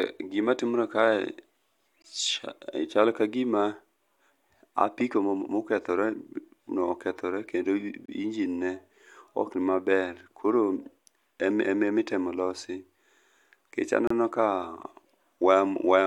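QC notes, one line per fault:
2.02–2.04 s, 8.06–8.08 s, 14.07–14.10 s: gap between stream segments. The speech drops out with hard, clicky edges for about 20 ms, 27 ms and 30 ms, spaced roughly 6 s apart. The timestamps of consecutive segments, which appear to be 6 s long, don't meet, so the player fills each seam with silence. This inserts time into the speech rather than removing any.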